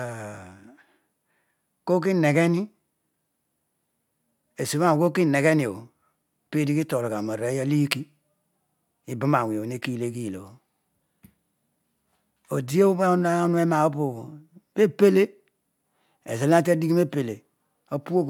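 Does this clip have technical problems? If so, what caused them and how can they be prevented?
No, there are no technical problems to report.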